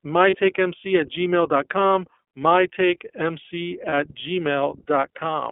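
From the start the speech runs through the iLBC codec, a narrowband VoIP coder. Nothing reaches much above 3.4 kHz or below about 250 Hz, so the sound is thin and boxy, and the plainly audible rough, slightly synthetic grain comes from the excitation being coded afresh every 30 ms frame, which fits the 13.33 kbps mode. Unlike a simple telephone band-limit, the damage is a texture in the signal, not just missing highs.

At 0.30 s and again at 3.89 s come lost iLBC frames, each gap lasting about 30 ms, which fits one dropped frame. The decoder fills each hole by repeating the last pitch cycle with added noise, so the speech briefly freezes into a held, faintly buzzy vowel. What separates this from an ordinary dropout or click is that nothing goes silent, and because iLBC frames don't depend on earlier ones, the speech recovers cleanly right after.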